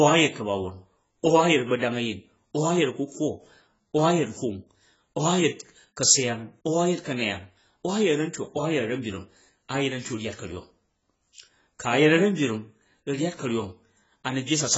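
From start to end, the speech sounds dull and smeared, with a warbling, fizzy texture on sustained sounds and sibilants, and nothing above 7.7 kHz. The likely cause is heavy AAC compression, where the encoder quantised the spectrum so coarsely that bands were left empty or filled with substitute noise, which fits a bitrate around 16 kbps. A simple low-pass filter would also cut the top, but it would leave the rest clean, without this swirling texture.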